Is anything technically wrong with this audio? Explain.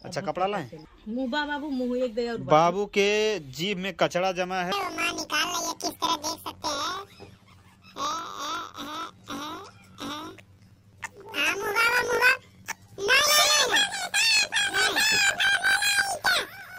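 Yes. From 4.72 s to the end, the audio suffers from planar audio read as interleaved. Each 20 ms block of left-then-right samples is read as alternating pairs. Each half plays at double speed, an octave up. Blocks this short turn that into a robotic 50 Hz buzz.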